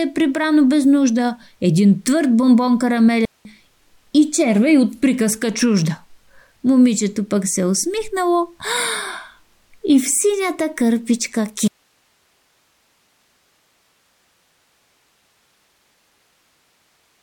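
At 3.25 s, just after "нужда един твърд бомбон", the speech drops into a digital wireless dropout. The receiver lost too much data from the link and muted itself. The fade is very short. What follows is a clean hole of near silence lasting about 0.2 s, until 3.45 s. There is no crackle or noise burst on either side. The speech simply stops and then resumes.

At 11.68 s, right after "синята кърпичка", the speech cuts out abruptly. It never returns. From there to the end of the clip there is an audio dropout to a faint residue. Only hiss remains, roughly 45 dB below the speech level. The cut is sudden, not a pause or a fade. The likely cause is a lost signal feed, with the path after the break still live and passing its own noise.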